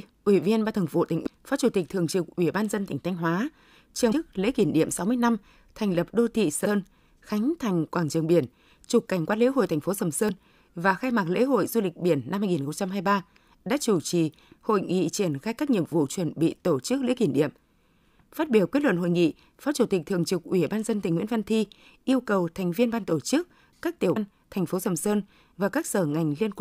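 Five short bursts of damaged data in the compressed stream occur at 1.26 s, 4.11 to 4.13 s, 6.64 to 6.66 s (between "thành lập đô thị" and "khánh thành quảng trường"), 10.29 s (just before "và khai mạc lễ") and 24.15 s (after "tổ chức các tiểu"). At each, corrupted frames make the decoder misread its input and lose sync, giving a brief glitch in the speech.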